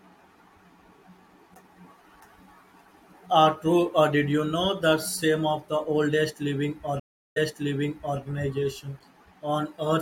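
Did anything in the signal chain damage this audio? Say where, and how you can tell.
Yes, a stream reconnect at the network stage: after "the oldest living", 7.00 to 8.19 s, 365 ms of silence, then a fresh decoder resumes 832 ms earlier. Unlike a dropout, sound repeats.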